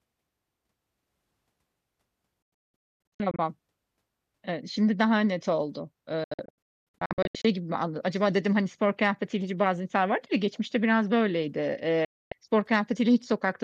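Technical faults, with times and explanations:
2.42–3.39 s, 6.24–7.45 s and 12.05–12.32 s, digital broadcast dropout: the receiver lost lock or rejected corrupt frames and muted them with 3 ms fades. The sound cuts out in holes of up to 240 ms in the first two and loses 264 ms in the third, the second falling after "şimdi daha net oldu" and before "gibi anladım" and the third after "ya geçmişte biraz böyleydi", and the missing sound is simply gone.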